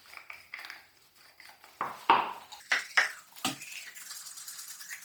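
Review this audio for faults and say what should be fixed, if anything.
The audio appears to have passed through a Bluetooth LC3 compression stage at a low bitrate. The codec works in short transform frames, which fits 10 ms framing at around 32 kbps. Starved of bits, it discards much of the upper spectral detail and fills the gaps with shaped noise. Damage is heavy throughout: the sound takes on a grainy, breathy edge, with high frequencies smeared into hiss rather than rendered cleanly. To prevent this, record or route over a wired path, or configure the LE Audio link for a higher LC3 bitrate.

From 2.6 s to the end, a section at the wrong speed plays at 1.97 times its proper rate, most likely because an editor or player clocked that portion incorrectly. Speed and pitch rise together in a sudden jump: the sound becomes hurried and chipmunk-like, shifted up by roughly ten semitones, and the events in that stretch pass in about half their natural time. 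To prevent this, verify that every segment is resampled and played against the same clock rate as the rest of the timeline.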